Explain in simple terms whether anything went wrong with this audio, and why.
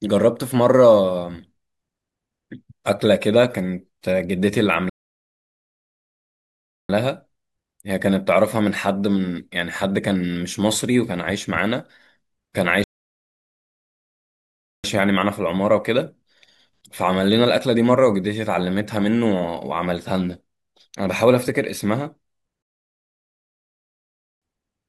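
The speech cuts out completely three times: from 4.9 to 6.9 s, 12.84 to 14.84 s, and 22.62 to 24.42 s. That's a playback stall, with silence of about two seconds each time, likely because the player ran short of data or got held up.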